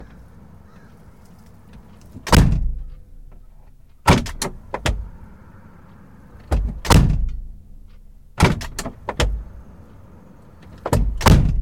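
Hard clipping at 2.33 to 2.46 s, 6.91 to 7.03 s, 8.41 to 8.47 s and 10.93 to 11.39 s: the sound's peaks exceed what the signal path can carry, by about 9 to 13 dB, and are sliced flat, adding a harsh, crackling fuzz on each loud burst.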